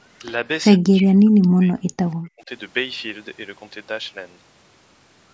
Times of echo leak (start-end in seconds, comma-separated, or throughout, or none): 2.11-2.15